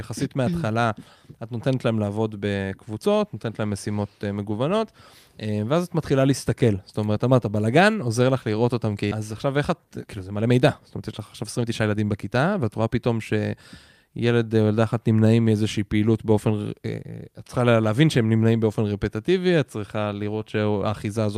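At 9.11 s the speech skips ahead: roughly a second of audio never reaches playback, most likely discarded by an overflowing jitter buffer or lost in transit while later packets were already queued. No fill is inserted, so the material on either side is butted together with no audible gap. The listener hears an abrupt discontinuity, with the sentence jumping forward mid-flow and the missing portion simply absent.

From 9.21 s to 13.10 s the jitter buffer speed-up is audible. After the jump, the receiver still holds more audio than its target depth and shortens it by repeatedly cutting out small pitch-period-length pieces. Playback runs at about 110 percent of normal rate with pitch unchanged, removing roughly 0.4 s in total. The speech sounds noticeably hurried across those four seconds.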